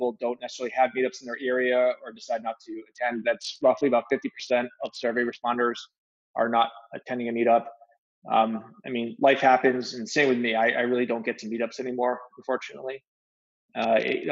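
This sound clip, band-limited to nothing above 8 kHz by call microphone processing, has two short stretches where the noise suppressor cut the sound, at 0.13 to 0.43 s and 1.96 to 2.23 s. The suppressor mistook steady parts for noise and pulled them down by as much as about 20 dB and about 13 dB, so around 150 ms and 300 ms of audio sink or fade early. There's also a Bluetooth SBC bit pool drop from 2.82 to 5.44 s and again from 13.82 s to the end. The treble goes dull and gritty quantisation noise creeps in, which sounds like a congested link pushing the bit pool from 28 down to 6, roughly 60 kbps.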